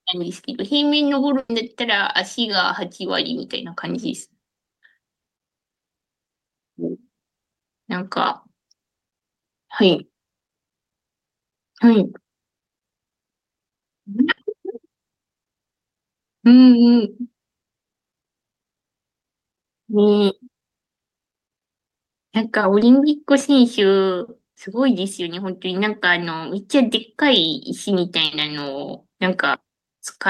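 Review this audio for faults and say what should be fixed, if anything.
Burst of packet loss at 1.39 to 1.51 s, 14.31 to 14.39 s and 28.25 to 28.33 s: the receiver stretched the last speech sound for about 100 ms, 60 ms and 60 ms, fading it into a buzz or hiss. At 1.39 s about 30 ms of silence follows. The speech then resumes, with that stretch lost.

Short concealed packet loss at 17.91 to 17.95 s and 22.79 to 22.83 s: about 20 ms of speech arrived too late, so the decoder extrapolated the preceding sound and blended back. Each is heard as a brief smear or wobble that can swallow a consonant.

Preventing both means stabilising the network path and giving the jitter buffer and forward error correction enough margin to rebuild lost packets before playback.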